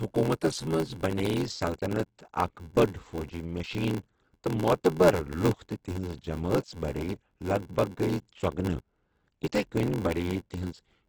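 Speech, and two faults run the whole way through. The top end is cut back to wideband, and what's left sounds rough and grainy, with bands filled in by noise rather than real detail. That's likely Opus compression in its music mode, hard-pressed at a low rate, something like 12 kbps. On top of that there's a steady 86.1 Hz buzz and everything plays slow, at 0.861 times normal speed, with pitch roughly where it should be. That's a block size mismatch (padded): each block arrives short, and the gap is zero-filled, which fits a 512-sample read.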